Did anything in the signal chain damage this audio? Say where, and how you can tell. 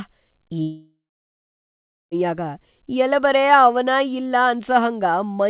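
Yes, at the network stage. From 0.62 s to 2.14 s the speech breaks off. The last sound smears into a fading buzz, then about 1.16 s of near-silence. This is likely a long network dropout, with 1.5 s of audio lost and concealed.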